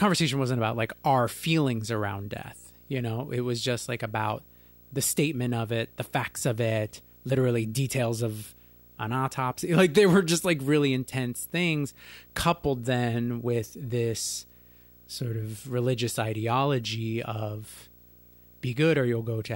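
A screen or video cable couples into the audio path throughout, producing video or display buzz at 59.94 Hz with hash and a faint 15.7 kHz line tone, roughly 30 dB below the speech.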